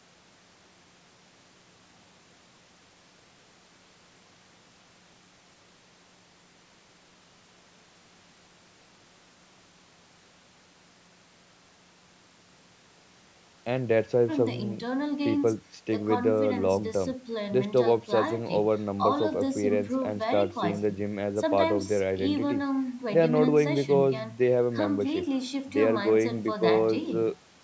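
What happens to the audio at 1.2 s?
Nothing goes wrong at 1.2 s: the speech passes through intact there, with only the ordinary call microphone processing trimming the lowest bass as it normally does.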